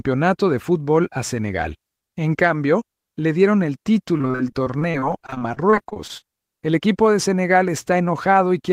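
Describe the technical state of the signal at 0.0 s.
At 0.0 s the signal is intact, with no audible fault at that moment.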